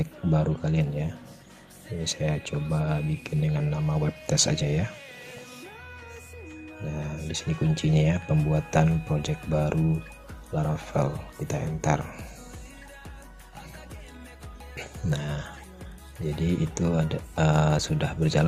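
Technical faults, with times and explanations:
Nothing stood out on listening, and no technical problem could be heard anywhere in the recording.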